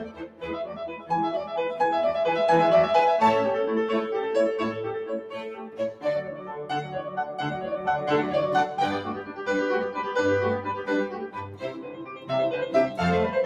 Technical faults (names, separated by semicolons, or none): noise suppressor applied to music or sounds; sound cut by the noise suppressor